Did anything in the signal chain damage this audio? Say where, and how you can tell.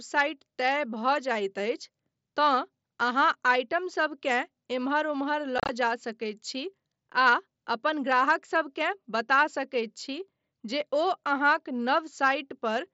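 Yes, on the Bluetooth headset link. Just after "एम्हर ओम्हर", 5.58 to 5.69 s, unconcealed Bluetooth headset packet loss leaves hard-edged holes in the speech: 75 ms lost over about 105 ms, longest gap 30 ms, with silence or an idle pattern filling the dropped packets.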